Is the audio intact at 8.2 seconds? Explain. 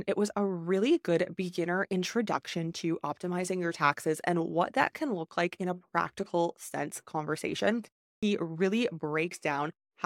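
No, there is a clipped start after a pause at 8.19 to 8.23 s: following a 0.34 s gap after "a practical sense conversation", the output device wakes late, swallowing about 36 ms of onset.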